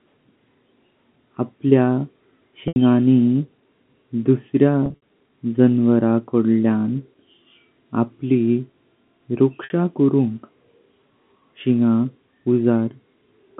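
Packet loss with pitch repetition occurs at 2.68 to 2.76 s, 4.86 to 4.98 s, and 9.64 to 9.70 s. Each gap is filled by looping the last pitch period, so the sound briefly holds with a buzzy tone. The middle loss is scattered, with runs up to 60 ms.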